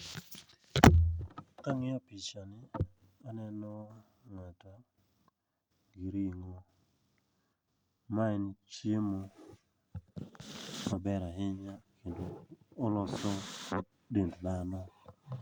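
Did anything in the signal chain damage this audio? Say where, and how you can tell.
No, nothing in the chain from capture to playback left an audible mark on this speech recording.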